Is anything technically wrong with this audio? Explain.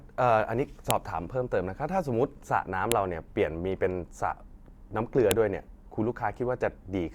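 Yes. A file header played as audio, at 0.91, 2.92 and 5.31 s: separately saved WAV pieces were joined with their headers left in, so those few dozen header bytes play as samples, giving a sharp, loud click at each piece boundary regardless of the speech around it.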